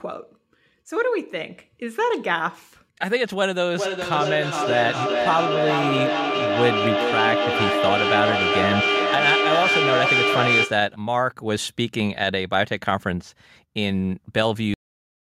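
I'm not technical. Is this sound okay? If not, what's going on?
No. There are two problems.

The first is a feedback echo between two devices. Two devices in the same room were on one call, and one played back what the other's microphone sent, so that microphone picked it up again. Each device's echo remover only cleans up its own playback, so the loop went unchecked. From 3.78 to 11.01 seconds, the speech comes round again about every four tenths of a second, thinner and more ringing, and the repeats build up to roughly as loud as the speech itself.

The second is a cut-off end. The final stretch of audio was never saved or played out, so the recording just stops. At 14.74 seconds the speech breaks off in the middle of a sound and drops straight into dead silence, with no natural fade. That silence runs to the end of the file.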